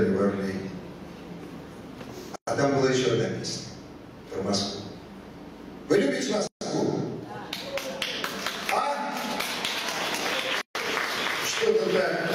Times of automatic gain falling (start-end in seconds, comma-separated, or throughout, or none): none